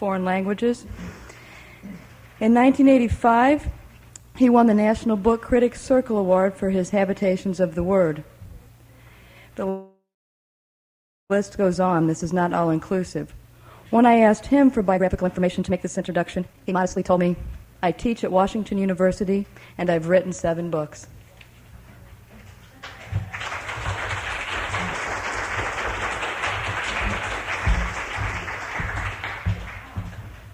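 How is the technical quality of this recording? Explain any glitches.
Two timing glitches interrupt the recording, both in how the audio was delivered in real time.

Call audio freeze, 9.69 to 11.32 s: the sound stalls and is stretched into a fading buzz that drops to silence for over a second. The likely cause is delayed packets draining the jitter buffer. Playback then resumes where it stopped, about 1.6 s late, with nothing lost.

Jitter buffer speed-up, 14.91 to 19.07 s: the receiver, holding too much buffered audio, trimmed many tiny pitch-period slices to catch up. The audio runs at about 138% speed with unchanged pitch, sounding hurried as roughly one and a half seconds disappear.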